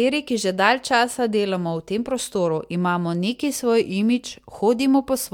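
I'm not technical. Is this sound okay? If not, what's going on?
Yes, nothing in this speech recording stood out as a problem when I listened to it.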